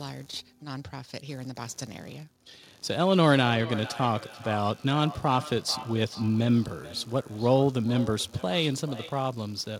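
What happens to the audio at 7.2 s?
At 7.2 s the speech is caught in a feedback echo between two devices, which runs from 3.04 s to 9.32 s. A second device in the same room plays back what this microphone sent, and the microphone picks it up again. Its echo canceller only removes its own playback, so the loop survives. Each syllable returns about every 0.4 s, thinner and more ringing each pass, peaking about 15 dB below the speech. Unlike room reverberation, the repeats arrive as distinct copies at one fixed spacing.

Underneath, computer activity noise is present at 7.2 s as it is throughout the clip. Processor, graphics or mouse load shifts the shared ground of the audio circuit, producing a low buzzing pulse at around 70 Hz, well below the speech. Mains hum stays steady. This buzz has a scratchy, chirping texture and comes and goes with the computer's activity rather than following the speech.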